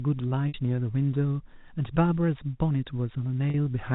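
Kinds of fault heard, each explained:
Packet loss with pitch repetition: Packets went missing in transit, and the receiver bridged each gap by repeating the last pitch period. Near 0.48 s a 60 ms gap and near 3.5 s a 40 ms gap each come through as a brief held, buzzy tone before the speech resumes.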